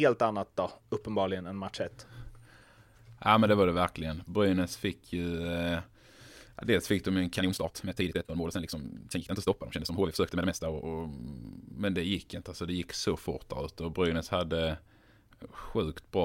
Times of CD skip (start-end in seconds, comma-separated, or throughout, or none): none